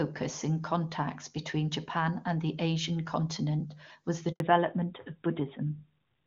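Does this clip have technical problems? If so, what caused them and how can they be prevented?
Yes. Handover gap, from 4.32 to 4.40 s, right after "continent was the": the call was passed from one network to another, and no speech frames reached the listener while the switch took place. The sound dies away quickly and is gone for 80 ms, and only returns once the new link begins carrying audio, so whatever was said inside that window is simply lost. Configuring the network for make-before-break handovers, with the new link set up before the old one is released, prevents this kind of dropout.

Fallback to narrowband, from 4.40 s to the end of the clip, starting at the same point after "continent was the": before the switch the AMR wideband (HD Voice) codec sounds clean, consistent with its highest rate of around 24 kbit/s. After it, the call continues on AMR narrowband, likely at 12.2 kbit/s, and nothing above 4 kHz survives. 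Sibilants lose their crispness and the speech turns duller and rougher than the first part. Making sure both networks and the handover path support HD Voice end to end keeps the call wideband after the switch.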